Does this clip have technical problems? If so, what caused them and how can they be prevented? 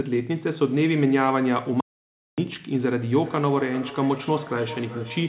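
Yes. From 1.80 s to 2.38 s there is an audio dropout to silence: about 0.57 s of sound vanishes into silence with no room tone underneath, which is the sign of a lost input, likely a disconnected device or dropped link, rather than a noise gate or packet-loss concealment. Securing cables and links and avoiding accidental mutes prevents it.

From 3.01 s to the end, feedback echo between two devices appears: each phrase returns as a distinct, thinner, more ringing copy roughly every 0.4 s, peaking about 15 dB below the speech. The fixed interval between separate repeats sets it apart from ordinary room reverberation. Keeping only one device joined to the call per room prevents it.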